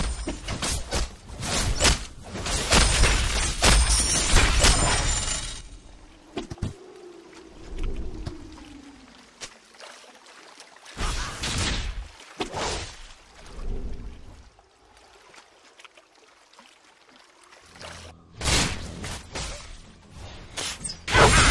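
No technical faults can be heard anywhere in the clip.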